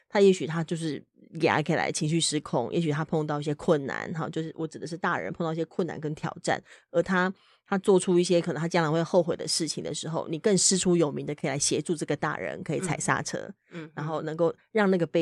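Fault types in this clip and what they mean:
No audible faults detected.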